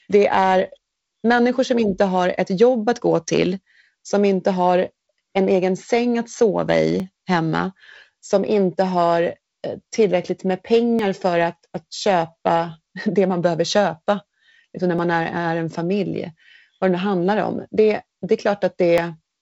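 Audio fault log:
7.00, 10.99, 14.99, 18.98 s: audio missing between chunks. Brief skips every 4 s, the first after "egen säng att sova", likely a few milliseconds lost at each chunk boundary. They show as waveform jumps and thin vertical spectrogram lines.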